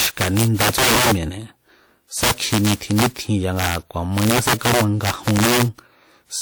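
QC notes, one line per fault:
Throughout: integer overflow. Speech peaks push about 12 dB past the integer limit and wrap to the opposite sign, cracking on roughly one sample in twenty.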